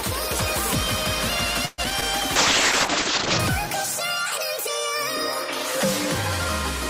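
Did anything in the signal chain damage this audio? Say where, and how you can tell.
Yes. Repeated packet loss (robotic sound) hits the network stage from 1.65 to 2.03 s: four holes, the longest about 126 ms, are patched by extending the last sound, giving a choppy stretch. A spectrogram shows smeared, repeated frames with abrupt breaks.

A call bitrate drop follows at the codec stage from 2.36 to 3.45 s. The top end is cut at 8 kHz, down from 20 kHz, and the sound turns rough and watery, which points to a rate near 7 kbps. The spectrogram shows a flat ceiling and blotchy detail.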